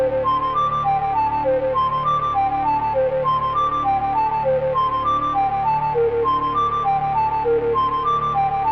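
A music clip with a doubled audio track running for its whole length: a second full-band copy of the music trails the original by around 150 ms, only about 5 dB quieter. Unlike a room echo or reverb tail, the copy is a single, exact repeat with no decay and no added room colour, which gives transients a flam-like smear. The likely cause is the same signal being captured twice, once through a slower path.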